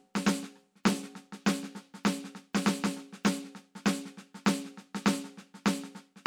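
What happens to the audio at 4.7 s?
Nothing goes wrong at 4.7 s: the music plays through that moment intact, with no dropout, click or other fault.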